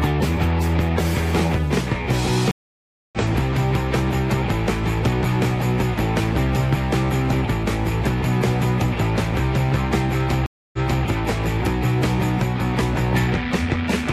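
A stream reconnect breaks the connection twice, restarting the decoder mid-stream. At 2.51 s the sound drops out for 614 ms and resumes about 0.7 s further on. At 10.46 s a 269 ms gap ends with 325 ms of audio repeated.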